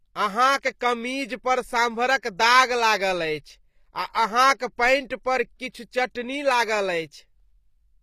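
From start to finish, the treble carries plainly audible codec damage: the top end sounds synthetic, with sibilants taking on a gritty, metallic or lispy edge, and nothing survives above 15.5 kHz. The likely cause is HE-AAC compression, where only the lower spectrum is truly coded and the upper bands are regenerated by copying lower content upward under a coarse envelope, so the rebuilt harmonics fail to line up. The damage points to a low bitrate, around 24 kbps.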